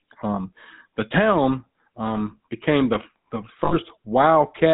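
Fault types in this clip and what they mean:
GSM full-rate codec: speech passed through the original GSM vocal-tract model with a sparse pulse excitation, giving a plainly audible buzzy, gravelly roughness, which fits a 13 kbps full-rate stream. A spectrogram shows nothing above 4 kHz and coarse, grainy harmonic structure.
Lost GSM frames: just after "um became the the", from 3.64 to 3.75 s, the decoder lost about 80 ms of frames and repeated the last good frame's settings, producing a rough, metallic ring. The waveform shows a smeared, repetitive stretch, and the spectrogram shows frozen bands where speech detail should change.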